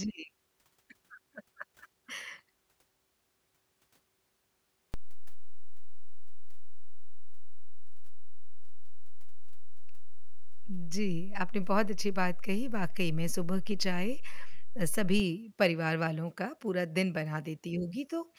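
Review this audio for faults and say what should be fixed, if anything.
A DC step shifts the zero line at 4.94 s by about -26 dBFS, holds it there, and returns it at 15.20 s. Each jump is heard as a low thump under the speech. On the waveform the baseline sits visibly off-centre between those times. The spectrogram shows a brief low-frequency burst at each step. To prevent it, keep offset-carrying inputs out of the live path and apply a DC-blocking high-pass filter before recording.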